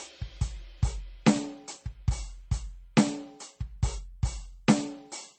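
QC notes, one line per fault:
Throughout: transcoding between lossy codecs. Nothing is present above 9 kHz. Smeared, warbling artefacts sit beneath a second layer of synthetic-sounding highs. The later encoder spent bits on earlier damage. This likely reflects roughly 35 kbit/s MP3 re-encoded as 40 kbit/s HE-AAC.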